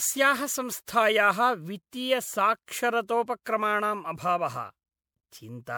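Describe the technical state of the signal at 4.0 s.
At 4.0 s the speech sounds swirly, hollow and smeared, with blurred attacks, as throughout the clip; likely generation loss from about five MP3 re-encodes, consistent with 128 kbit/s.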